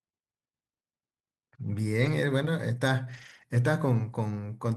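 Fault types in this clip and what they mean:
Lost packet rebuilt from error correction: low-bitrate backup copies fill losses at 2.01 and 3.05 s, sounding rougher; spectrogram shows grainier, smeared bands, waveform unbroken.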